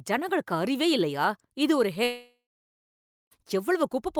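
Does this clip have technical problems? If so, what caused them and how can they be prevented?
Yes. From 2.03 to 3.33 s the speech breaks off, and the last sound smears into a fading buzz before about 0.89 s of silence. That's likely a long network dropout, with roughly 1.3 s of audio never arriving, so the speech picks up again further along with that chunk gone. A steadier connection, or a larger jitter buffer with packet redundancy, would help prevent it.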